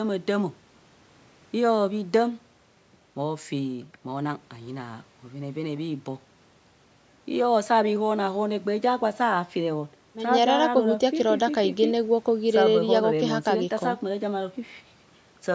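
No technical faults can be heard anywhere here.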